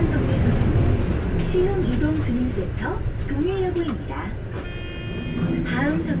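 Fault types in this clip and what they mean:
No faults detected in this audio.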